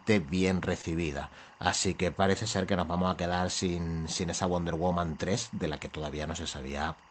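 From the start and running through the whole speech clip there is timecode bleed: linear timecode at 24 frames per second leaking from an adjacent track or cable. Its square wave flips between tones near 1 and 2 kHz, sitting roughly 25 dB under the speech as a steady chirping warble. Unlike a hum or a single whistle, it keeps an even, buzzy flutter and never follows the speech's level or pitch.

At 0.81 to 0.85 s comes a short concealed packet loss. About 20 ms of audio arrived too late to decode, and the receiver covered roughly 14 ms of the gap by extending the preceding sound before blending back into the real signal. It comes through as a brief smear or wobble, not the hard click of a digital dropout or a stretch of silence, because the hole was filled rather than left empty.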